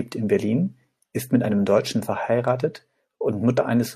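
A short glitch breaks into the speech from 3.53 to 3.58 s: damaged data in a compressed stream, where corrupted bytes made the decoder misread frames and resynchronise.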